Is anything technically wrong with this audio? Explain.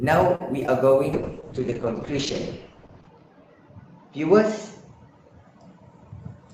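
Yes, there are four kinds of fault.

From 0.35 to 0.42 s there is a short stall from a late packet. The jitter buffer ran dry, so the last sound was held for about 47 ms until the packet turned up. Nothing is lost, which separates it from concealed loss: the audio simply lingers, then resumes where it stopped.

At 0.60 to 0.63 s and again at 0.67 to 0.70 s there is short concealed packet loss. Each time, about 20 ms never reached the decoder, and the gap was patched by extending the preceding sound. Unlike the stall, real audio is missing, so each spot sounds like a quick smear or wobble.

From 1.14 s to the end there is a call bitrate drop. The encoder was pushed to spend far fewer bits, and the top of the spectrum falls from 20 kHz to about 8 kHz, which points to a fall from roughly 32 to 8 kbps. It stays at its worst for about 1.95 s. The result is muffled and coarse. It lasts for seconds rather than a single instant, and that separates it from the packet faults.

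From 5.90 to 6.14 s there is a jitter buffer speed-up. Too much audio had built up, so the receiver cut out small pitch-period pieces, removing about 50 ms in total and running at 115% speed. The pitch stays the same while the timing rushes. That sets it apart from a resampling error, which would also raise the pitch.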